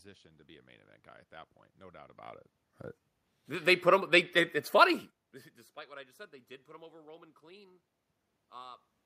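Nothing in this speech recording points to a technical problem: the background noise is just the room around the microphone, and the level shifts at about two and five seconds are simply the talker moving nearer to or farther from the mic.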